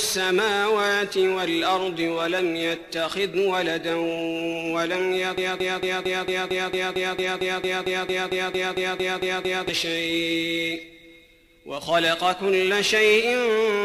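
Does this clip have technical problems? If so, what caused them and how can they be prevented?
Yes. A stalled player, encoder or stream likely kept resending the last fragment it held, causing a broken-record loop from 5.38 to 9.69 s: a 226 ms piece repeats exactly 19 times back to back, and the audio due in that span never plays. Watchdog logic that detects the stall and outputs silence or reconnects, instead of replaying the held buffer, prevents it.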